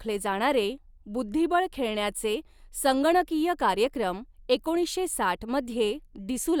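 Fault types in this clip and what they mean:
No faults to report: nothing in the speech recording registers as a technical defect.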